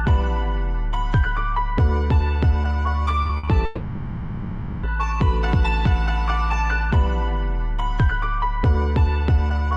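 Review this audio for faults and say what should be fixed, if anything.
Repeated packet loss (robotic sound) runs from 3.23 to 3.49 s: four short gaps, the longest 60 ms, were patched by extending the preceding sound. Nearly half that quarter-second is synthetic fill, giving a choppy stutter with pieces missing. Jitter buffering with redundancy or forward error correction would prevent it.

A long network dropout, likely a stalled stream, spans 3.65 to 4.85 s. About 1.2 s of audio never arrived, and concealment stretched the last sound across the whole hole as a smeared, decaying buzz or hiss with no silence. Better link stability and retransmission would prevent it.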